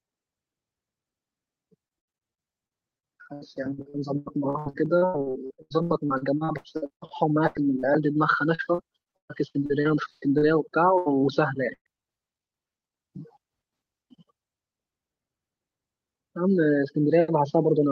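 From 1.87 to 7.86 s and again from 8.55 to 10.45 s, repeated packet loss (robotic sound) chops the speech. Lost packets are patched by stretching the preceding sound, leaving about 29% of each span concealed, with gaps up to 83 ms in the first stretch and 130 ms in the second. It sounds choppy, with pieces missing. A spectrogram shows smeared, flat-striped harmonic blocks between torn segments.

A burst of packet loss follows at 10.98–11.09 s, dropping about 80 ms, and another at 11.74–11.88 s, dropping 120 ms. The receiver extends the last sound while fading it, so each gap becomes a brief held buzz or hiss. In the second burst it decays to 70 ms of silence. The waveform shows a tapering envelope, then a flat gap before the speech resumes abruptly.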